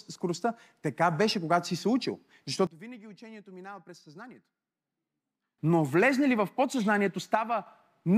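Right after "когато си се учил", at 2.67 s, the speech and its background noise drop together by about 21 dB until 5.58 s, then return; a shorter dip of about 6 dB follows from 7.35 to 7.66 s. Both are likely a sudden gain jump, with level switched instantly without a ramp.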